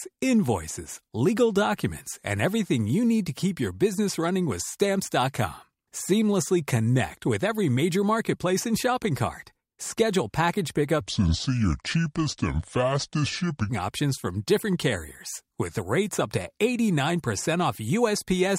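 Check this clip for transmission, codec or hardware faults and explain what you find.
One fault. From 11.01 to 13.69 s, a section at the wrong speed plays at 0.68x, likely from a clock mismatch. Pitch drops about seven semitones and the pace slows together, unlike a pure pitch shift.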